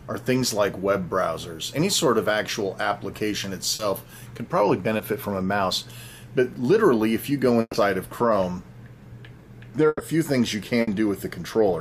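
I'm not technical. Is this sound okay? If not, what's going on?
No. Short concealed packet loss at 3.75 and 4.97 s: a few hundredths of a second never arrived, so the receiver stretched the previous sound, giving a brief smear.

Burst of packet loss at 7.61, 9.87 and 10.81 s: gaps of 120, 120 and 60 ms were patched with a fading continuation, with brief silences in the first two, and the missing audio is skipped.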